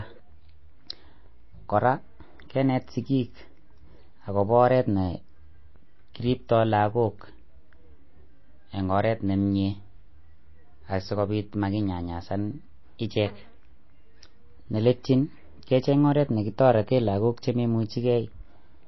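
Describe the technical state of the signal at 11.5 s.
At 11.5 s the speech carries MP3 compression damage, as it does throughout: nothing above 5.8 kHz and watery, swirling sibilants, likely from a starved, roughly 24 kbps encode. A spectrogram shows a hard ceiling and flickering holes.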